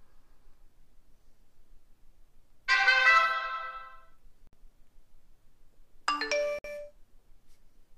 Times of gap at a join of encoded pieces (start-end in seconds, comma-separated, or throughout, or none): 4.47-4.53, 6.59-6.64